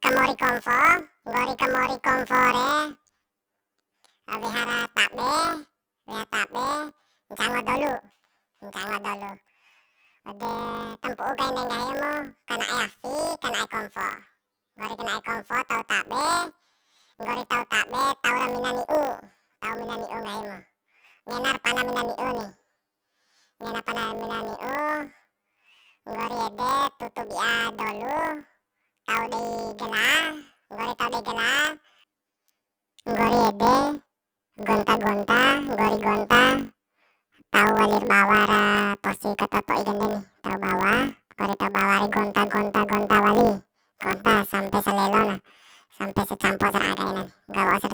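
From start to finish, the speech carries a planar audio read as interleaved fault. Each 20 ms block of left samples followed by right samples is read as alternating pairs, so the block plays twice at double speed. With blocks this short, the result is a robotic buzz at 50 Hz, not a clear octave shift. A spectrogram shows vertical striations every 20 ms, and the waveform repeats a compressed shape twice within each block.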